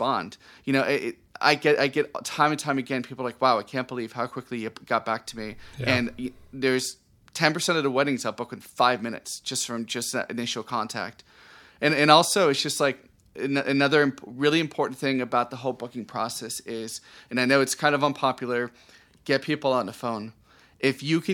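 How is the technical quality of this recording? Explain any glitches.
No glitches or technical faults can be heard anywhere.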